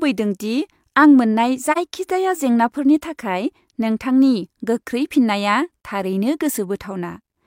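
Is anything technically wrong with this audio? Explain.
Yes. At 1.72 to 1.78 s the speech has AAC frame loss with muting. About 43 ms of audio went missing, which fits a single lost frame. The decoder zeroed that spectrum, and the overlapping windows fade the sound out and back in, leaving a brief dip.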